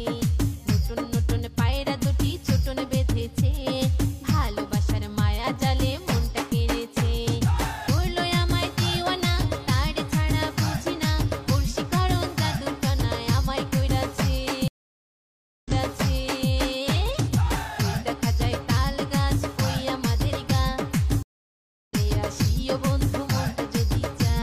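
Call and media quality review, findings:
Stream reconnect, 14.68–16.49 s: connection dropped, player re-established the stream and started a fresh decoder mid-stream. About 975 ms of silence, then audio resumes 836 ms earlier, as the server re-sent buffered data; a short stretch repeats.

Stream reconnect, 21.23–21.94 s: second drop and decoder restart. About 664 ms of silence, then playback picks up roughly half a second later than where it stopped, so audio is skipped; onset fades in.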